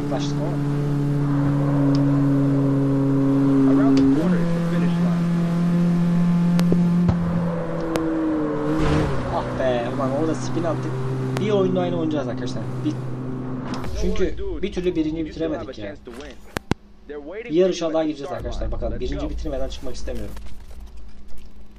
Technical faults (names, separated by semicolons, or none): loud pop